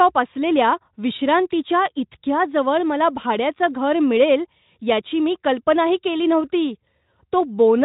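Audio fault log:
Nothing to log here: the speech comes through with no faults, and the Speex coding leaves at most a faint trace.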